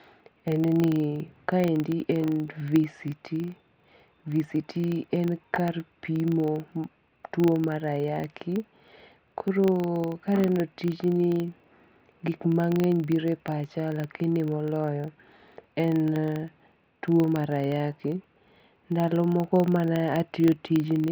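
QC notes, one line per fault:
Throughout: filter restarted on every block. A steady 25 Hz buzz rides under the speech, rising and falling with its level. The filter drops its state at each block boundary, so every 40 ms block opens with a small transient.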